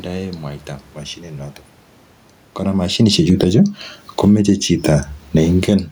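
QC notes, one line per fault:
2.72–4.49 s, automatic gain falling: just after the talker shifts position around 2.5 s, the AGC reads the input as too loud and eases gain down about 15 dB, so voice and room noise sink together.
3.51–5.2 s, automatic gain rising: overlapping that dip, the AGC now judges things too quiet and creeps gain back up about 6 dB, so speech and background swell together.
5.22–5.84 s, automatic gain falling: the AGC pulls gain down again, about 7 dB this time, and the level and the room noise drop together near the end.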